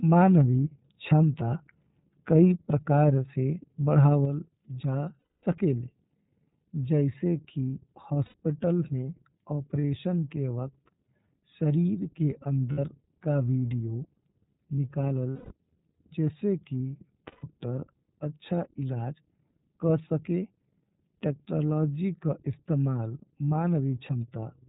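The speech is band-limited by the iLBC codec, with nothing above 4 kHz, and has plainly audible coding damage: a rough, slightly synthetic edge. The sound fits iLBC's 13.33 kbps mode with 30 ms frames. Unlike a band-limited but smooth narrowband codec, it sounds gritty, and each frame's excitation is coded on its own without drawing on the frame before.

There are also lost iLBC frames at 5.19–5.44 s (240 ms), 8.25–8.35 s (90 ms), 9.81–9.84 s (30 ms), 12.72–12.79 s (60 ms), 15.30–15.52 s (210 ms) and 17.27–17.44 s (150 ms). Each gap is filled with the last pitch cycle repeated and mixed with noise, so it sounds like a held, buzzy vowel that fades in the longer gaps, not silence or a click. What separates it from concealment in codecs that carry state from frame to frame is the recovery: the voice is correct again almost immediately after each gap, with no smeared tail.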